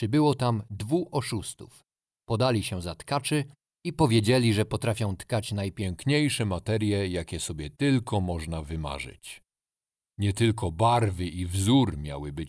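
Right after "powiedzieli że potrafią tkać", at 5.82 s, the speech drops into a wrong sample rate problem that lasts to the end of the clip. The samples are being played back slower than they were captured, with no resampling, so speed and pitch fall together: everything runs at about 0.92 times normal speed and sits about 1.5 semitones lower. That ratio fits 24 kHz material played out at 22 kHz.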